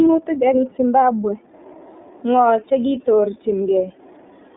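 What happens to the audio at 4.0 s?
At 4.0 s the speech is still passing through the iLBC codec, as it does for the whole clip. The band is narrow, roughly 250 Hz to 3.6 kHz, and nothing above 3.8 kHz survives. The codec builds each 30 ms frame's excitation on its own, without leaning on the previous frame, which fits its 13.33 kbps mode. The coding damage is plainly audible. The voice sounds muffled, slightly rough and synthetic, like a phone line.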